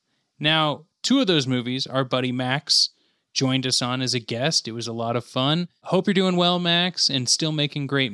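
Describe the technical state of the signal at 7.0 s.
At 7.0 s the signal is intact, with no audible fault in the audio at that point.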